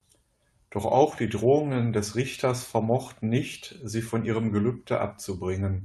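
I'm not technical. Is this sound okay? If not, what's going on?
Yes, nothing stood out as a problem when listening to this speech, which comes across the way a normal internet call would.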